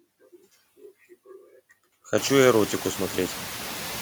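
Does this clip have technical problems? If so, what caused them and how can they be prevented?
Yes. Noise suppressor artifacts run through the whole clip. The suppressor treats steady background as noise and pulls those bands down frame by frame, by about 13 dB. The background sinks in the pauses and comes back up under the speech. This holds even after the room noise itself rises by about 22 dB around 2 seconds, still sitting about 17 dB below the speech. Lighter suppression settings, or a quieter room that needs less suppression, would prevent this.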